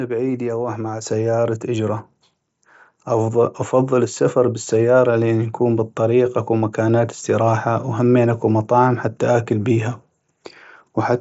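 Microphone volume stepped up at 1.02 s and again at 2.04 s. The call software judged the input too quiet and raised the device's gain in one jump each time, about 5 dB then about 2 dB, so speech and background grow louder together.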